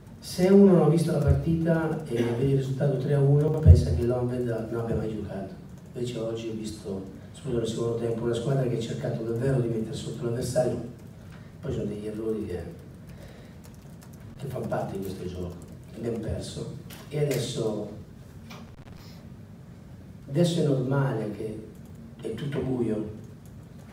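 At 3.48 to 3.6 s, chunks out of order: a 60 ms chunk plays one chunk late, giving a jumbled moment. Loose connector crackle follows at 14.30 to 14.38 s and 18.67 to 18.99 s, where an intermittent contact chops the signal into scratchy bursts. At 21.78 to 21.96 s, a chunk lands two late.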